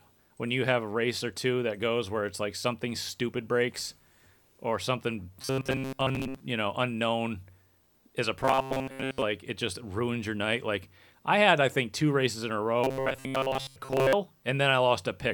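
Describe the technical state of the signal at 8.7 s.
At 8.7 s the speech carries robotic sound from repeated short buffers, from 8.43 to 9.22 s, between "is a" and "it just ruins your". Most of that span replays a roughly 7.5 ms snippet, likely from audio arriving too seldom, imposing a metallic 133 Hz buzz. A spectrogram shows rigid, evenly spaced harmonics of 133 Hz; the waveform shows identical repeating cycles.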